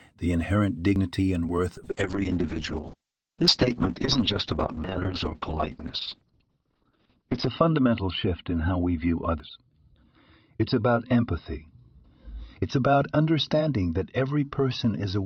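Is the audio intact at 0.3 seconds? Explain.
Yes, the speech at 0.3 seconds plays through cleanly, with no dropout, click, distortion or other fault at that moment.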